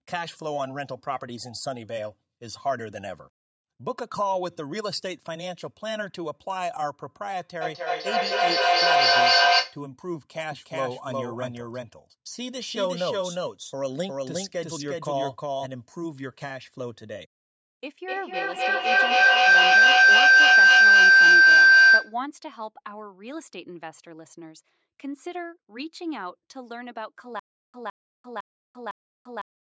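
From 7.61 to 9.85 s there's feedback echo between two devices: a second device in the room is playing the call back into a microphone whose echo canceller can't see it. The speech comes round again roughly every third of a second, and the loop gets loud, peaking about 11 dB above the speech itself.

Between 10.52 and 15.66 s you get a doubled audio track. A full-band copy of the speech, at about the same level, trails the original by roughly 400 ms, with no decay or room colour on it. That's most likely a second, slower capture path mixed in, and it cuts in and out abruptly.

From 18.07 to 22.21 s the loop gains on every trip and turns into full feedback howl. Instead of fading, the repeats, coming round roughly every 300 ms, narrow down to a tone around 1.5 kHz that climbs to about 15 dB above the speech before it breaks off.

From 27.40 s to the end there's a stutter with silent gaps, likely the stream stalling and replaying its last fragment on each retry. 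A 162 ms burst repeats every 505 ms with about 343 ms of dead digital silence between, four times over, and the audio that should have filled that stretch is gone.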